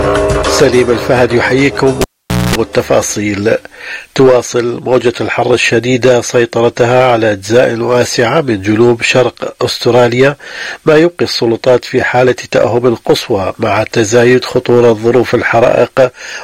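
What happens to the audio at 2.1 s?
At 2.1 s the audio is in the middle of a cable pulled and plugged in event, from 2.01 to 2.55 s. A pop marks the break, and the signal drops to near silence for about 0.49 s. A 60 Hz mains buzz lasts about 0.23 s while only the plug tip makes contact, and a second pop comes as the sound returns. On a spectrogram the pops are thin vertical broadband lines around a dark gap, crossed by horizontal stripes at 60 Hz and its harmonics.

Hard clipping is present here as well as throughout. The signal is driven about 7 dB past what the chain can pass, so around 3 percent of samples are cut flat. The waveform shows squared-off peaks, and the spectrogram shows smeared high-frequency energy on loud moments, heard as harsh crackle.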